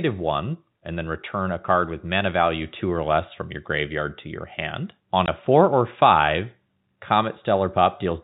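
At 5.26 s the speech drops out for 20 ms: packet loss filled with silence. One lost packet became a clean gap with hard edges.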